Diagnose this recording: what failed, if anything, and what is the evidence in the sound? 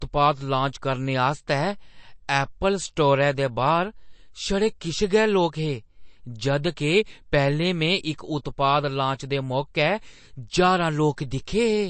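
The codec stage is the weak link: the speech has most likely been through MP3 compression at a starved bitrate, consistent with something in the region of 36 kbps. Throughout the clip the treble stops dead at 8.3 kHz, where the encoder has cut the top band to save bits, and the damage is plainly audible. Weak frequency lines drop in and out between frames, giving the voice a watery, swirling texture, with chirpy sibilants and softened consonant attacks.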